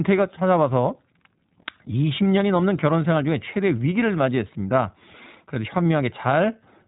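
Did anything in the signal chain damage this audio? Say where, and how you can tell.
Yes, at the codec stage: the iLBC codec runs through the whole speech clip. A spectrogram shows nothing above 3.8 kHz, and the voice has a plainly rough, synthetic edge from each frame's excitation being coded independently, which fits 20 ms frames at about 15 kbps.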